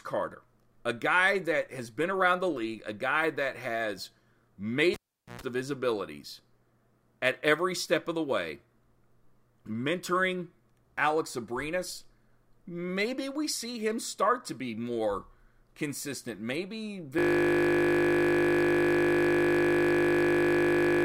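At 4.94 s a live cable is pulled and plugged in again, so the signal path is broken for about 0.42 s. The sound pops out to near silence, then, while only the plug tip makes contact, a 60 Hz mains buzz lasting about 0.11 s breaks through before a second pop restores the signal at 5.41 s, just ahead of "of his abilities".

From 17.19 s to the end, a system hang loop sets in: the computer or driver has frozen while the audio hardware keeps replaying the same 20 ms stretch of its ring buffer. Because that slice repeats exactly, close to two hundred times, the speech disappears into a steady, tonal 50 Hz buzz at the loop rate that continues until the clip ends.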